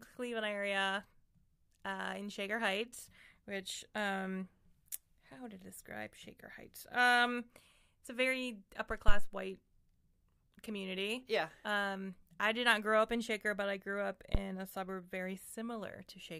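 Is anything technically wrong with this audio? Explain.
Yes. A phantom power thump occurs at 9.08 to 9.32 s, right after "it's a very upper", and again at 14.35 to 14.41 s, between "but I grew up" and "a suburb very". Switching the supply on a live input sends a voltage step through the coupling capacitors, heard as a deep low thump. The first peaks at about -12 dBFS and decays in 54 ms. The second is smaller, about -17 dBFS, and dies away in 14 ms.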